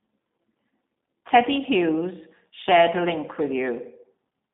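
All the way through, the speech carries G.729 codec damage: the line band runs about 200 Hz to 3.6 kHz with nothing above 3.7 kHz, and the pulse-and-filter rebuild leaves a plainly rough, synthetic edge, which fits an 8 kbit/s G.729A stream.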